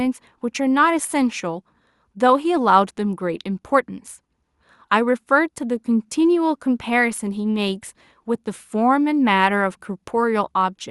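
Nothing technically wrong turns up anywhere in this bit of speech; there's simply no fault to report.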